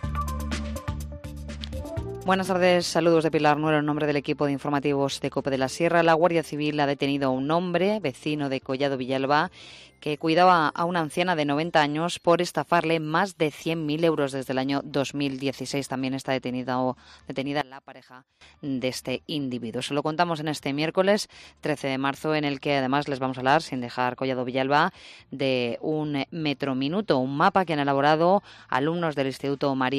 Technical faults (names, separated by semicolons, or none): one channel inverted